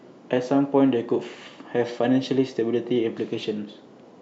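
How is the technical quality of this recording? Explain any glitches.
Nothing glitchy turns up here: the recording runs along steadily with no dropouts, clicks or other technical hiccups to explain.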